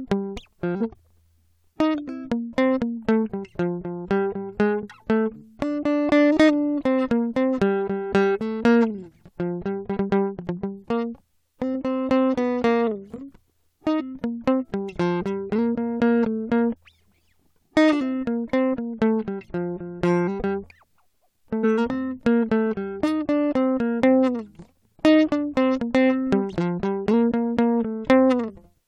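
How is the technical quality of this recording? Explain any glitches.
The music is marred by five short glitches from damaged data in a compressed stream, at 0.80, 11.74, 13.99–14.01, 21.63 and 28.48–28.50 s. Corrupted bytes make the decoder lose frame sync. Each is a brief chirp or blip.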